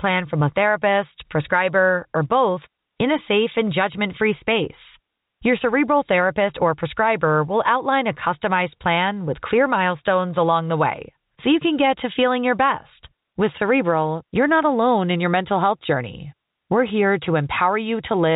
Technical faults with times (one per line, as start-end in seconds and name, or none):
none